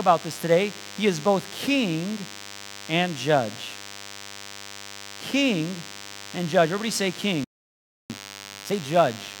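DECT cordless phone buzz runs through the whole recording, a thin, steady 100 Hz drone with a dense stack of harmonics sitting roughly 15 dB under the speech. A nearby DECT handset or base fires a radio burst every 10 ms, and the audio circuitry rectifies those bursts into audible buzz.

A playback stall hits at 7.44 s: the speech cuts off mid-flow and the output goes silent for about 0.66 s, until 8.10 s. The player likely ran short of data or had its output thread blocked, so nothing reached the output until it recovered.

Time-compressed catch-up follows from 8.10 to 8.74 s. The speech runs at twice normal speed with unchanged pitch, as the player cuts out short slices and cross-fades the remainder to work off the backlog built up during the stall.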